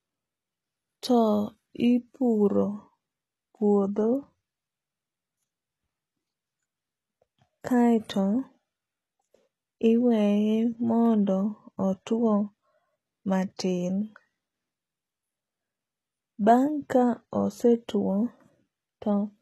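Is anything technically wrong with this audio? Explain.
Yes. HE-AAC compression, throughout: the sound is likely HE-AAC coded, which fits a low rate around 16 kbps. Only the lower spectrum is coded, with the treble rebuilt by copying lower bands upward, so s sounds turn gritty and lispy, and nothing remains above 12.4 kHz.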